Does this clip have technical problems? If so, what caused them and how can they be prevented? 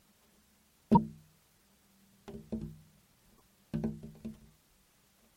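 Yes. Damaged data in a compressed stream: corrupted bytes made the decoder misread frames and lose sync while it hunted for the next valid frame header, producing a brief chirp, squawk, click or short hole at 0.95 to 0.97 s and 3.33 to 3.41 s. Preventing this means delivering the file over checksummed transport and verifying its integrity before decoding.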